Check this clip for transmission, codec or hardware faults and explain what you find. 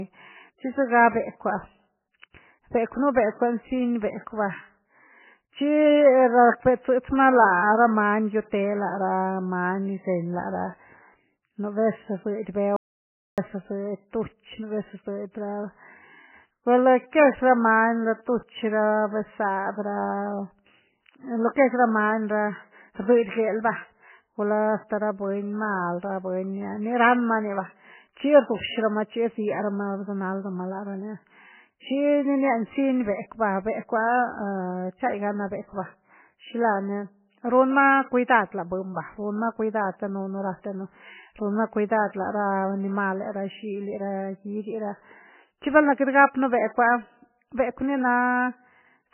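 Two faults are audible in this speech clip: heavy codec damage throughout and one brief dropout to silence.

Throughout, the speech sounds watery and swirly, with nothing above 3 kHz, which points to MP3 compression at a very low bitrate, likely around 9 kbps, cutting treble and flickering weak frequency lines.

From 12.76 to 13.38 s the sound cuts to complete silence for about 0.61 s, with no room tone. This is an audio dropout to silence, likely from input briefly lost while silence was recorded.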